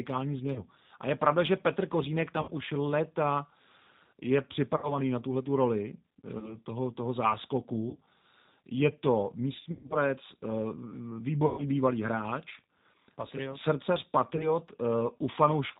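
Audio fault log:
Throughout: G.729 codec. The speech is carried at 8 kbit/s by a codec that rebuilds each 10 ms frame from a vocal tract filter, a pitch predictor and a handful of pulses rather than the waveform itself. Nothing above 4 kHz survives, so the sound is narrowband and dull, and the coarse excitation gives it a plainly rough, slightly synthetic edge that stays audible across the whole clip.
0.53 to 14.57 s: VoIP packet loss concealed by the speech codec, at 0.53, 2.42, 4.77, 6.39, 7.90, 9.60, 11.46 and 14.36 s. Lost packets of 30 to 120 ms are filled by the decoder extending its last pitch and filter with falling gain, so each gap turns buzzy or fades, then stays weak briefly after recovery. The worst is 9.60 to 9.97 s, with 210 ms lost over 300 ms and a 120 ms run.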